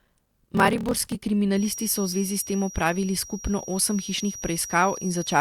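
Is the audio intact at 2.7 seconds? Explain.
No. A feedback whistle runs from 1.5 s to the end of the clip. It is a thin, steady tone near 5.7 kHz, well below the speech and swelling and fading slowly in level. The likely cause is a loudspeaker-to-microphone loop held just at the edge of feedback.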